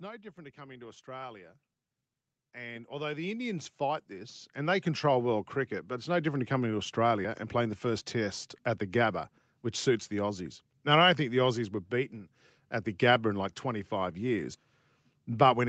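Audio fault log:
0.35–1.59 s and 2.53–6.39 s, automatic gain rising: the gain control judged the input too quiet and raised it, by about 6 dB and then about 14 dB, so speech and background swell together. The waveform envelope widens steadily, and the spectrogram brightens across all frequencies at once.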